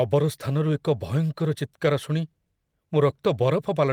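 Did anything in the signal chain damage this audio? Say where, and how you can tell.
Yes, at the network stage: a lost packet rebuilt from error correction, at 1.39–1.41 s and 3.09–3.11 s. Each 20 ms stretch turns rougher and noisier with no gap, as the decoder plays a low-bitrate copy carried by the next packet. Plain concealment would smear or repeat earlier sound instead.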